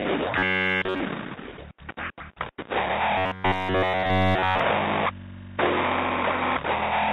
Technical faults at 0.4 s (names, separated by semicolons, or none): robotic sound from repeated short buffers